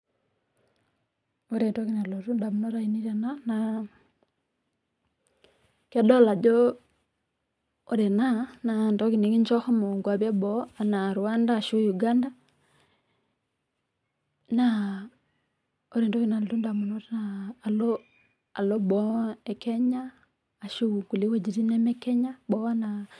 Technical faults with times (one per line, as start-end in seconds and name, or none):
none